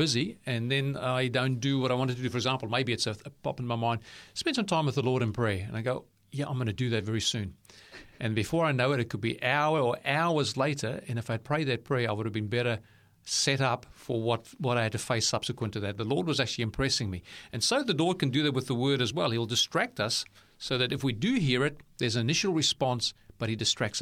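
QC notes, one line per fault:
No faults found.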